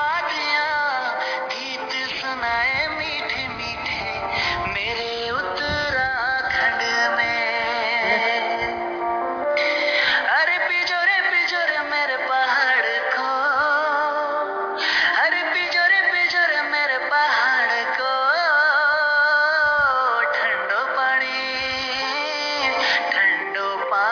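From start to finish the high end sounds gritty and metallic, with harsh tones that don't follow the pitch of the material and a spectrum that runs hard up to about 5.5 kHz and stops there. This is aliasing: the audio was downsampled, which fits a drop from 44.1 kHz to 11 kHz, without first filtering out content above half the new rate. Everything above 5.5 kHz folded back down as fairly strong false frequencies.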